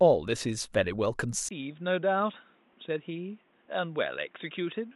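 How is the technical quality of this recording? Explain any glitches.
The recording has one fault. From 1.49 s to the end, the input likely switched to a poorer device. After a 20 ms gap, the speech turns dull above 3.8 kHz, about 10 dB quieter, with new faint background noise.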